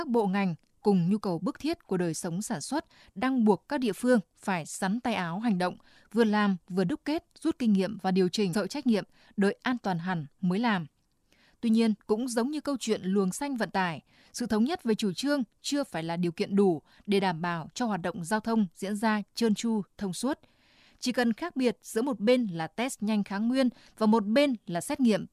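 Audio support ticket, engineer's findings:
Stream segment skipped at 8.52 s: speech jumps abruptly from "kinh nghiệm và điều" to "trách nhiệm đợi an" with a brief blip at the join, and a chunk of programme is gone. Likely cause: one stream segment failed to load and the player resumed at the next. Waveform shows a hard discontinuity at the splice with no fade. Spectrogram shows a thin vertical broadband line, with harmonic contours stopping and restarting at the splice.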